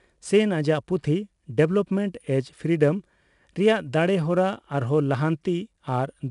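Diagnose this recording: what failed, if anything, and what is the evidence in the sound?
Codec stage: 4-bit ADPCM compression throughout. Coarse adaptive 4-bit steps leave gritty hiss tracking loud speech, with nothing above 10.6 kHz, consistent with about 89 kbps.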